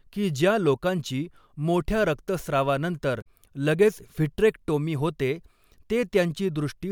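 From 3.18 to 3.27 s the speech is broken by a short glitch caused by damaged data in the compressed stream. Corrupted bytes there made the decoder misread its frames and lose sync, producing a brief disruption until it locked onto a valid frame header again.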